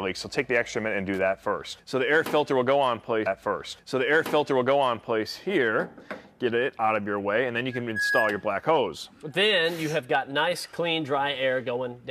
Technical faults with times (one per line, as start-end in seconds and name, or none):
1.14-1.21 loose connector crackle
3.25-5.25 stream segment repeated